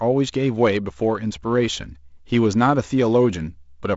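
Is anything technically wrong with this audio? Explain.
No: wideband G.722 telephone coding at 48 kbit/s, with the band ending near 7.7 kHz and only the light hiss and slightly grainier low band that this codec leaves.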